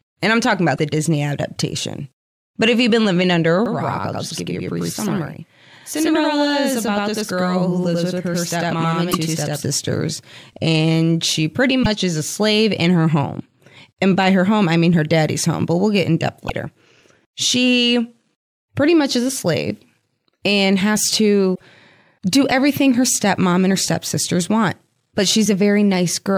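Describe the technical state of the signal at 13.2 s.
The signal at 13.2 s is intact, with no fault audible at that moment.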